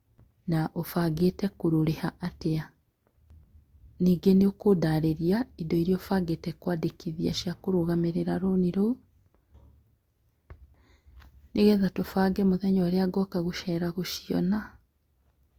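Throughout, the speech likely passed through transcoding between lossy codecs, fitting a Vorbis-then-Opus chain, so two kinds of codec smearing overlap, with nothing above 20.1 kHz.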